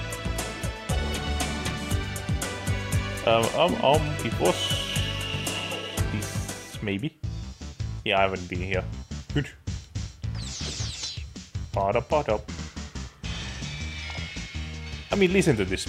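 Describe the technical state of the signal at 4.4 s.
At 4.4 s the signal is intact, with no audible dropout, clipping, distortion or other technical fault.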